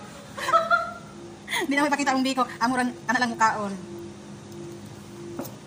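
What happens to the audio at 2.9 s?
At 2.9 s the sound is rushed, its pace jumping ahead while the pitch holds steady. This is a time-stretched section, running from 1.42 to 3.48 s, likely squeezed to 1.7 times speed by software dropping short pieces to shorten it without shifting pitch.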